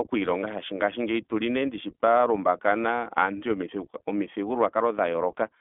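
Throughout, the speech passes through the iLBC codec, which codes each 20 ms frame independently at a rate that fits its 15.2 kbps mode. Nothing reaches above 3.8 kHz, so the speech sounds narrowband and telephone-like, with a plainly audible rough, synthetic edge.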